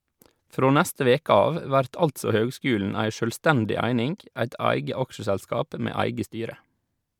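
No technical faults can be heard anywhere in this speech recording.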